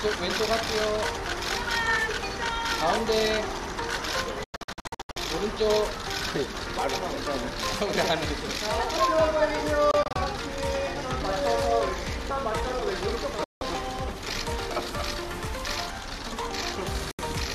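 Digital broadcast dropouts: the receiver lost valid frames and muted until good ones returned, so the sound snaps to silence, in scattered short holes from 4.44 to 5.17 s and 9.91 to 10.16 s, then single gaps at 13.44 to 13.62 s and 17.11 to 17.19 s.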